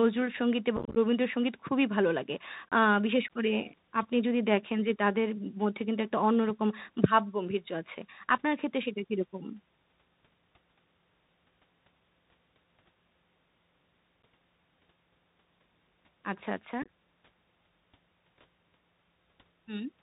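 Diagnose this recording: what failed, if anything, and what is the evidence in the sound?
The whole call shows Bluetooth CVSD headset codec damage at the codec stage, and it is plainly audible. Nothing passes above 4 kHz. Loud, bright sounds overload the one-bit delta modulator, because its adaptive step cannot climb fast enough, so they distort. Sibilants turn scratchy. A granular hiss sits under the speech. All of this fits a 64 kbps CVSD headset link.

Unconcealed Bluetooth headset packet loss appears twice, at the network stage between headset and phone. From 0.77 to 0.97 s, about 124 ms of audio drops out in holes scattered over 195 ms, with the longest run 26 ms. That region sounds chopped and crackly, which points to around thirty lost packets. From 16.82 to 16.88 s, 45 ms goes missing over 68 ms, with the longest run 22.5 ms. Each hole has abrupt edges, and the audio returns briefly quieter.

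An underrun with held sample occurs twice, at the driver or buffer stage. At 2.69 to 2.72 s, the waveform freezes flat for 29 ms, so the sound stops with little click. Live audio of about that length was skipped meanwhile. At 14.23 s, a shorter 9 ms hold does the same thing. The output buffer ran dry, and the converter held its last value.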